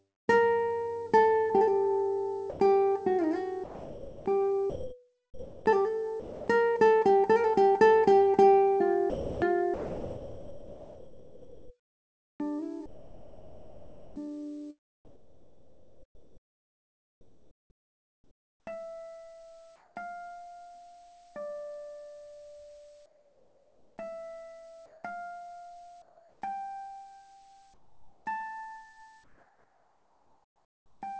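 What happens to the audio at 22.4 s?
Nothing goes wrong at 22.4 s; the audio continues intact through that moment, carrying only the ordinary band limit of the call path, with no content above 8 kHz.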